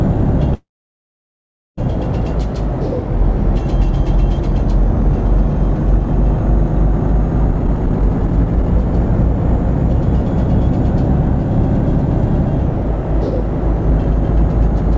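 From 0.54 to 1.79 s there is a call audio freeze: a brief fading tail, then about 1.1 s of silence, likely from delayed packets emptying the jitter buffer. From 7.48 to 8.66 s, a jitter buffer speed-up trims repeated short segments, so the audio plays at about 140% speed at unchanged pitch and roughly half a second is removed.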